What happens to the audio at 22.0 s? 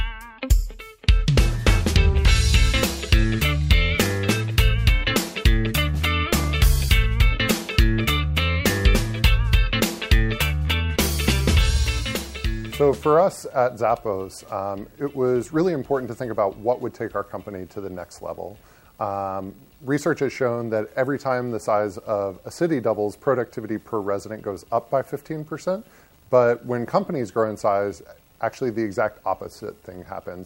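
Nothing goes wrong at 22.0 s; the audio plays through that moment intact, with no dropout, click or other fault to be heard.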